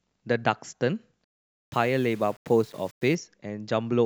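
From 1.24 to 3.15 s the speech turns gritty, likely from low bit depth without dither, fitting 8-bit rounding. The waveform looks stair-stepped, and signal-following hash spreads across the spectrogram.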